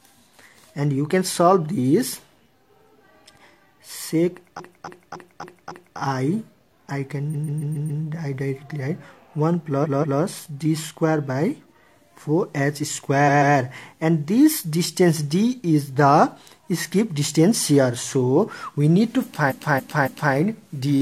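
The sound stutters, the same short fragment replaying, at 4.55 to 5.95 s, 7.29 to 7.99 s, 9.80 to 10.17 s, 13.24 to 13.52 s and 19.46 to 20.30 s. These are repeated frames: 0.14 to 0.28 s blocks of compressed frames replay two to five extra times, stretching the audio.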